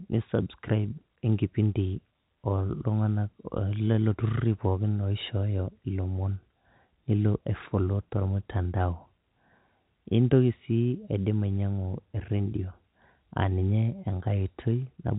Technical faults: none

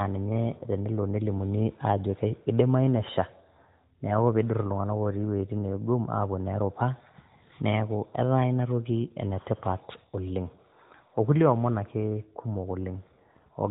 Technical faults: none

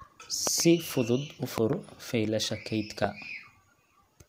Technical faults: loud pop

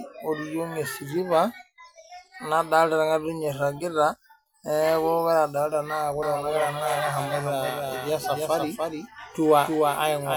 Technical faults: doubled audio track

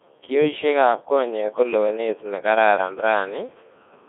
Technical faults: Codec 2 vocoder

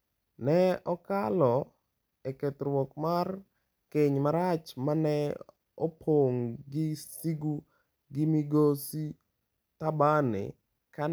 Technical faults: none

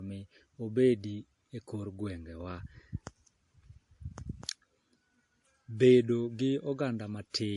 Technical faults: transcoding between lossy codecs

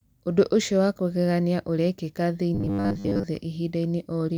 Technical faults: robotic sound from repeated short buffers

